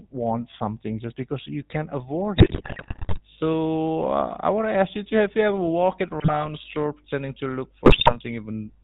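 The whole speech clip carries GSM full-rate codec damage, plainly audible. The voice sounds buzzy and gravelly. Nothing comes through above 4 kHz. The vocal tract is modelled and driven by sparse regular pulses, which fits the 13 kbit/s full-rate coder.

GSM bit errors strike from 2.38 to 3.2 s, from 6.2 to 6.47 s, and from 7.86 to 8.17 s. Corrupted filter, pitch and gain values reach the decoder. The voice breaks into squawks, pops and gargling. The first burst is longest.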